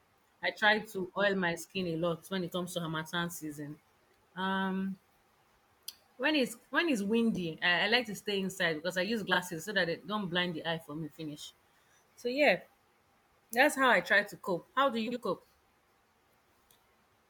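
Frames out of order at 7.35 s, 9.31–9.37 s and 15.07–15.17 s break up this speech recording: two adjacent blocks were decoded swapped, so each stretch plays its halves reversed, a brief garbled flutter with no time lost.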